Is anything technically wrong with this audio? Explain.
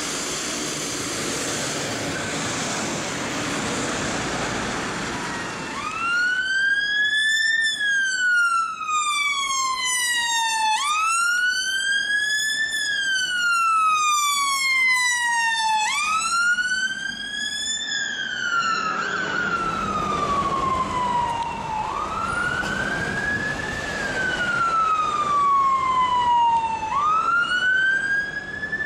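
Yes. An input switched to a poorer device, from 17.82 to 19.56 s, likely explains it: the recording's source changes to hardware passing nothing above 7.6 kHz. The sound turns abruptly duller, with a faint new background noise, no gap and no obvious level jump.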